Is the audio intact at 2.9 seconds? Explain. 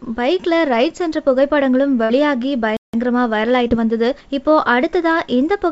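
No, there's a playback stall from 2.77 to 2.94 s: the sound drops out for about 170 ms, likely because the player starved of data, then resumes.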